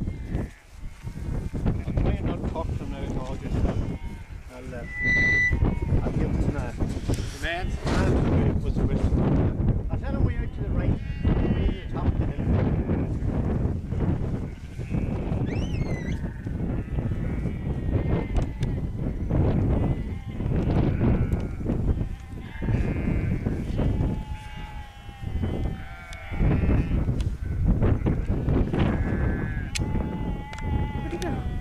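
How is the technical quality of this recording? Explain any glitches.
The recording has one clear fault. From 4.83 to 5.59 s there is a loudspeaker feedback squeal: the microphone re-amplifies its own loudspeaker, so a 2 kHz tone swells over roughly a third of a second to about 5 dB above the sound.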